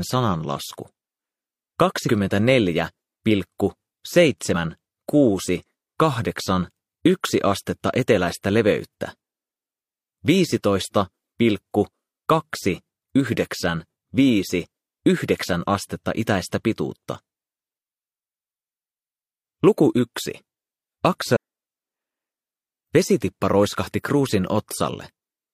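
Damaged data in a compressed stream makes the decoder misread frames and resync, producing brief glitches at 4.51–4.55 s and 21.32–21.37 s in this audio.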